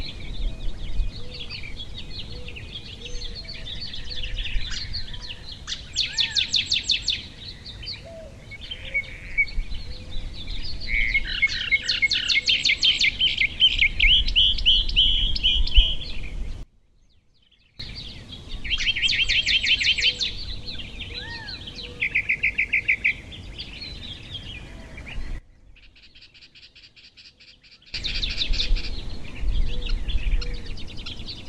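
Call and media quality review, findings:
Sudden gain jump, 16.63–17.8 s (down about 24 dB) and 25.4–27.94 s (down about 19 dB). Sound and noise floor drop together instantly, then step back up, unlike an AGC ramp. Likely an unramped gain setting or bit shift.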